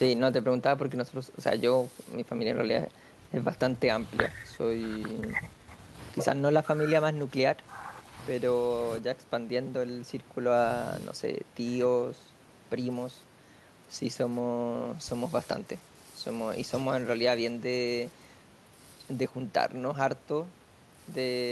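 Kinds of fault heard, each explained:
No technical faults heard.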